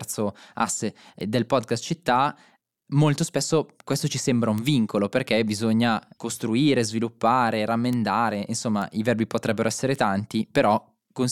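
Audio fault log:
1.21, 4.58, 7.93, 8.82 and 9.96 s, bit error spike: five isolated sharp ticks. The first comes just before "del podcast città molto" and spans two samples. The one at 7.93 s follows "perché bisogna costruire sviluppare", and the one at 9.96 s follows "i verbi potrebbero essere". Peaks reach about -22, -10, -10, -16 and -16 dBFS. Each is a flipped bit throwing a sample by a power of two before it snaps back. On the waveform this shows as a lone needle, and on the spectrogram as a thin full-band vertical line unrelated to the speech.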